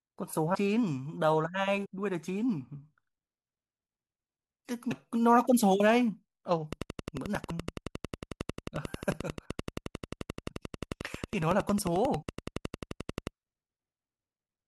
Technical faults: compressed frames skipped; train of clicks

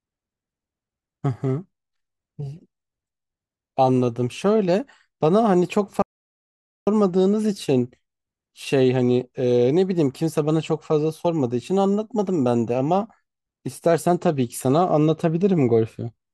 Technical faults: audio dropout to silence

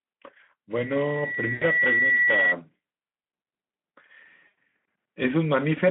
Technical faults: loudspeaker feedback squeal; VoIP packet loss concealed by the speech codec

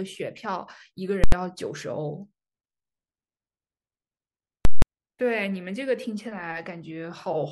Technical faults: invalid numbers at full scale

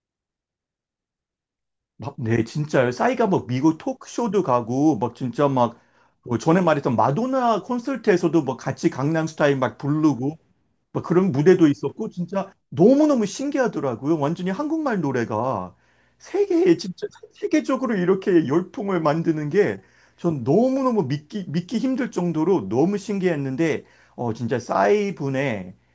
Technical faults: none

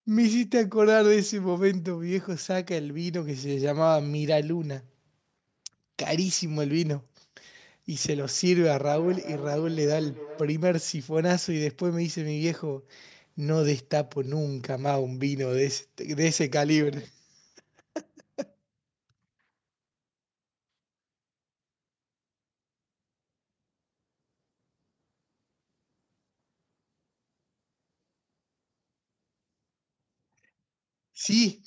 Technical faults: feedback echo between two devices

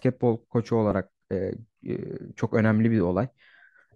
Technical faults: DAB burbling

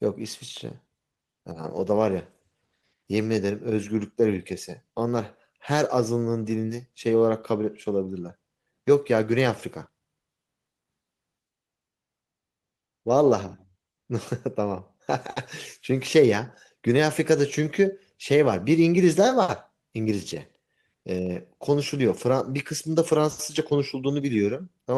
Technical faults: none

